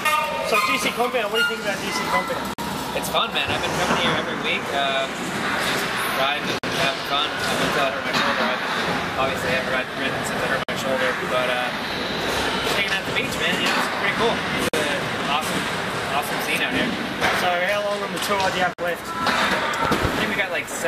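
The audio has hard-edged 50 ms holes from gaps between chunks at 2.54, 6.59, 10.64, 14.69 and 18.74 s, spaced 4.05 s apart, which fits a player or codec leaving silence at each join. Dropouts from lost data would come at irregular times. Between 19.85 and 20.07 s a loud pop arrives as two sharp hits about 15 dB above the signal while the sound continues beneath, likely from a switch, plug or static discharge. This sets it apart from a gap, which interrupts the sound instead of adding to it.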